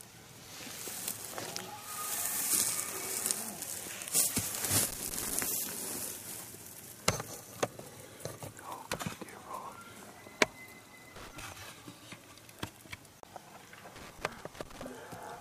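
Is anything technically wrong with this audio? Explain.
Yes. Loose connector crackle appears from 4.88 to 5.48 s, 11.16 to 11.40 s and 13.96 to 14.87 s: a worn or dirty contact repeatedly makes and breaks as it shifts, chopping the signal on and off. It comes through as irregular bursts of scratchy crackle.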